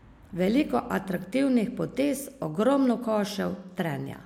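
No technical faults can be heard anywhere in this speech recording. There is nothing to point to at any moment, so no times or values apply.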